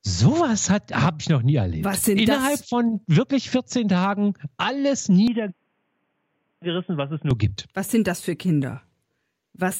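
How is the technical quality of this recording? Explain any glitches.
There's one real glitch here, a stretch from about 5.28 to 7.31 s where the sound drops in quality and then recovers. It sounds like an input switched to a poorer device. The system most likely hopped to a lesser mic or a headset's call profile, which passes nothing above 3.4 kHz. So the speech suddenly goes boxy and dull, falls about 5 dB in level, and picks up a faint new noise floor well beneath it. There's no gap at the switch; it just flips over and back.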